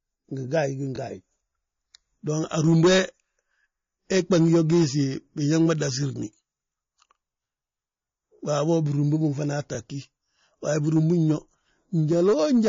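Speech with plainly audible MP3 compression damage throughout, likely from a low-bitrate encode that fits about 32 kbps. Nothing remains above 7.2 kHz, and weak detail flickers with a watery, swirly quality on s sounds, which sets it apart from a simple low-pass filter.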